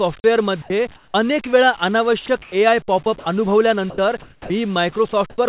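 Over a telephone-narrow band with nothing above 4 kHz, the speech keeps getting clipped by what is likely sound dropped by the voice detector. Bits of sound get judged as background, so transmission stops and steady noise fills in at 0.62–0.70 s, 2.26–2.28 s, 3.04–3.06 s, 3.90–3.98 s, and most noticeably 4.22–4.50 s, where about 120 ms of sound vanishes.

In the pauses, the real room tone is likely swapped for comfort noise in place of the background. At 0.96–1.14 s it turns smooth and featureless and drops about 8 dB. At 2.42–2.52 s the level barely changes, only about 1 dB down. At 5.30–5.38 s it falls about 4 dB.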